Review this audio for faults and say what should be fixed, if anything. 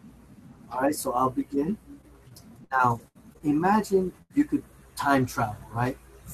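A brief rough, noisy patch at 1.05 s, and two more at 5.18 to 5.20 s and 5.22 to 5.24 s, each about 20 ms, with no dropout. These are lost packets rebuilt from error correction. Each missing packet was replaced by the lower-bitrate copy carried in the following packet, so the sound stays continuous but loses detail. Enabling or strengthening in-band FEC was the right defence. Reducing the underlying loss on the network path would prevent it.

Choppy, robotic speech from 2.01 to 3.42 s, with fragments dropping out. This is repeated packet loss. There are six separate holes, the longest 69 ms, concealing about 13% of that stretch. Each hole was patched by extending the previous sound before the next loss arrived, with roughly 20 ms rebuilt from error correction. A larger jitter buffer and a more stable connection would prevent it.

A short held buzz or fading hiss from 4.22 to 4.32 s, after which speech jumps ahead with about 80 ms missing. 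This is a burst of packet loss. Several consecutive packets never arrived, so the decoder stretched the last sound and faded it until real audio resumed. Prioritising the audio stream (QoS) and adding redundancy over bursty links would prevent it.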